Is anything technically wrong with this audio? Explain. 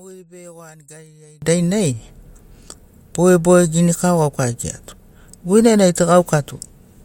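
Yes. One channel inverted, from 0.0 to 1.42 s: the speech collapses to a faint trace, about 28 dB quieter than the rest of the clip, before returning to full level. The likely cause is reversed polarity on one stereo channel. When the two channels are summed to mono, everything they share, including the centred voice and its low end, cancels, leaving only the small difference between them.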